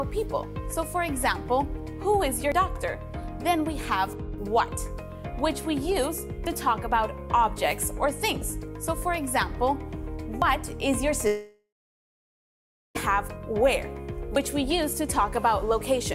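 The audio skips abruptly at 2.52, 6.47, 10.42 and 14.36 s, roughly every 4 s, each losing about a twentieth of a second, likely audio missing between chunks. From 11.27 to 12.97 s a long network dropout likely cuts about 1.7 s: a brief fading fill gives way to roughly 1.3 s of silence before sound resumes.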